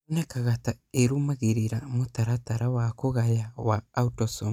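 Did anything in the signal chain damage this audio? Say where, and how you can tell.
No, nothing in the signal chain damaged this audio.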